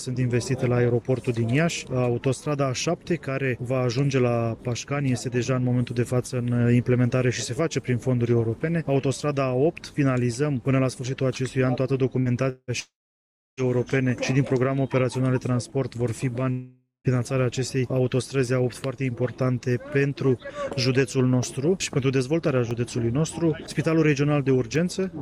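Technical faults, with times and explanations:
12.19–12.29 s, burst of packet loss: About 60 ms of audio is missing. The last sound is carried on and turned down, so it becomes a short fading buzz or hiss before the sound resumes further on. On a spectrogram, the harmonics smear into a flat, dimming band. In the waveform, a smoothly decaying stretch replaces the original.
12.50–12.71 s, 12.80–13.60 s and 16.51–17.07 s, long network dropout: The gaps last about 180, 780 and 540 ms, likely from the network stream stalling. Each begins with a fading continuation of the last sound, then falls to silence for about 30, 660 and 150 ms before the sound returns, with the part in between missing. The spectrogram goes dark in these silences. The waveform flattens to a line.
22.71–24.76 s, periodic USB or driver dropouts: About three ticks, spaced exactly 1.024 s apart. At each one, about half a millisecond of audio is dropped and replaced by silence, which fits a driver or bus stall on a fixed schedule. 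On a spectrogram, each tick shows as a thin vertical broadband line. The waveform has a tiny notch at each one.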